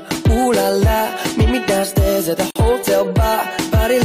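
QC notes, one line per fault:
2.51 to 2.56 s, gap at a join of encoded pieces: the sound drops out for about 51 ms and then carries on from where it stopped. The edges are smeared by the codec. Two separately encoded pieces were butted together without trimming, so the encoder's start-up delay and last-frame padding both stay in as dead air. These joins repeat every 4 s, so only this one falls inside the clip.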